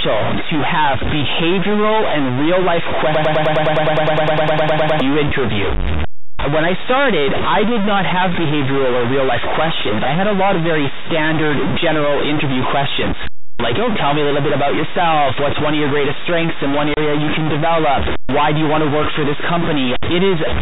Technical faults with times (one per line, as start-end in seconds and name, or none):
0.00-20.62 stuck bit
3.15-5.01 broken-record loop
16.94-16.97 packet loss filled with silence